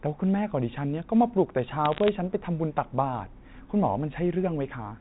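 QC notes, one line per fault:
1.85–2.09 s, bit errors on a digital phone line: a short burst of sharp ticks and crackle over otherwise continuous speech, fitting roughly a few tenths of a percent of bits flipped on the G.711 path, where corrupting the sign or high-order bits throws single samples far off.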